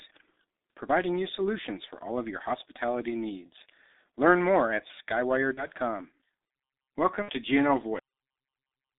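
Speech, carried throughout by the G.723.1 codec and heavily damaged by it. The audio sits in a narrow telephone band of roughly 250 Hz to 3.7 kHz, so it sounds muffled and boxy, and the low bitrate, which fits a rate around 6 kbit/s, leaves it hoarse with smeared consonants. Unlike simple low-pass filtering, the roughness comes from a coarse voice model updated only every 30 ms, so transients blur and the tone has a grainy, synthetic edge. VoIP packet loss concealed by the speech codec appears twice, from 5.54 to 5.68 s and from 7.22 to 7.31 s. The decoder fills the gaps, about 30 ms and 60 ms of missing audio, by repeating its last pitch and filter shape at falling gain. The result is a brief stretched, fading sound rather than a silent dropout or a click. Because each decoded frame builds on the one before, the voice stays weak and warped for a while after the gap. In the first event this lasts well beyond the lost 30 ms. 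This lingering recovery separates it from a plain gap or an edit. The audio then has a cut-off end at 7.99 s. It stops mid-sound and drops straight to digital silence with no decay, because the final stretch was never written or played. That hard, immediate stop distinguishes it from a fade-out or from natural trailing room sound.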